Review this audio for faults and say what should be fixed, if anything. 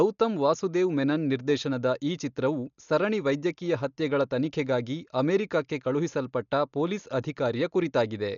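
Throughout, the speech sounds dull, with nothing above 6.9 kHz and a rough, fluttering noise around tones. The likely cause is heavy Dolby Digital compression at a bitrate fitting 48 kbps. The encoder narrowed the band and left many frequency lines without bits, so the decoder filled them with dither noise. Encoding at a higher bitrate, or delivering from a lossless master, would prevent it.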